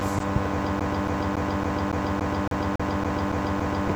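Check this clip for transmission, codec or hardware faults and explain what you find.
There's one fault here. From 0.80 s to 3.88 s the speech gets caught in a CD stuck on one turn. A scratch keeps knocking the laser back a track at the same point each revolution, so the same 280 ms slice of speech replays about eleven times, with a tiny mute at every jump. You hear it as that quick, perfectly regular stutter of a skipping disc, locked in place until it finally breaks free.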